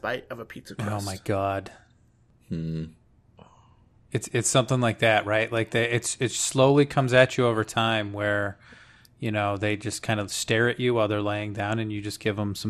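Throughout the whole clip, the speech shows the marks of likely MP2 compression, with the damage plainly audible. An MPEG Layer II encoder divides the signal into 32 sub-bands and rations bits among them; starved of bits, which fits a rate of roughly 80 kbps, it drops upper bands entirely and quantises the rest coarsely. The result is a dull, muffled top end, flickering high bands, and a gurgling, granular roughness riding on the speech.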